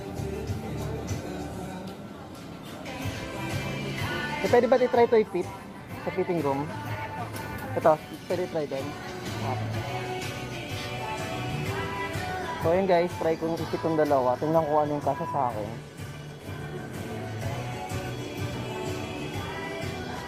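No audible technical faults anywhere in the audio; nothing to flag.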